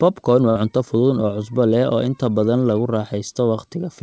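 At 0.50 to 0.57 s there is a burst of packet loss. For about 55 ms the receiver stretches the last sound it had and lets it fade, which produces a short held, thinning tail rather than clean silence. Roughly 60 ms of the original audio then never arrives, and the speech picks up at "cunto fudud oo cusbo". The fading fill is what separates this from a plain dropout or an edit cut. The clip carries no content above 8 kHz, which fits a G.722 call codec.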